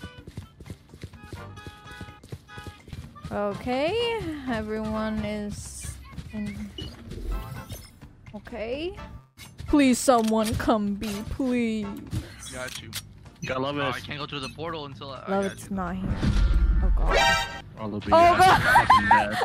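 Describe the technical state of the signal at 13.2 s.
At 13.2 s the signal is intact, with no dropout, clipping, glitch or other technical fault audible.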